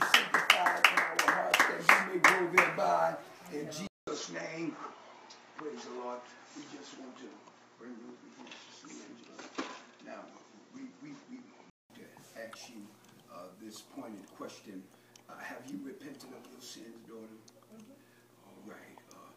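At 3.87 s the sound drops out for 200 ms. It then returns duller and boxier, with nothing above 7.6 kHz. The level shifts by about 5 dB, and a faint new background noise sits roughly 50 dB below the signal. This lasts until 11.90 s, when the full, brighter sound returns. The likely cause is an input switched to a poorer device, such as another microphone or a headset's call profile, with its own narrower band, tone and noise.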